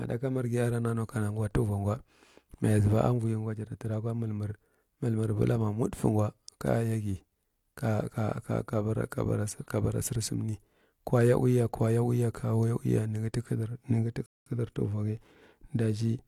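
A speech recording with one rebuffering stall near the end: at 14.26 s the sound drops to silence and picks up again at 14.46 s, carrying on from exactly where it left off. That's the player running dry on downloaded audio and waiting for more to arrive, so nothing gets skipped, but the gap adds about 202 ms to the playback. It's a clean hole rather than a garble.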